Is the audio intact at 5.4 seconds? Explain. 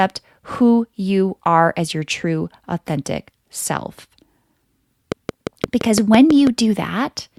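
No. At 5.4 seconds you're right inside a train of clicks that runs from about 5.12 to 6.48 s. It's a regular ticking, close to 6 clicks per second, around ten in all, each about 15 dB louder than the speech, so they pop out clearly. The pulses all have much the same shape, which likely points to interference from nearby equipment or a faulty connection or power supply injecting a pulse on a steady cycle.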